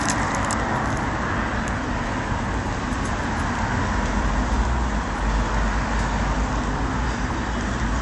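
From start to finish the sound is dull above 11.3 kHz and watery, likely MP3 compression near 49 kbps, unlike a plain low-pass because weak details flicker on and off.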